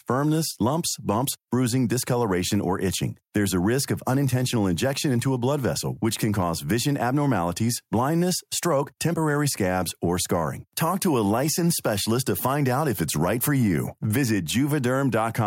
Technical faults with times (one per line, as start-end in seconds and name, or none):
none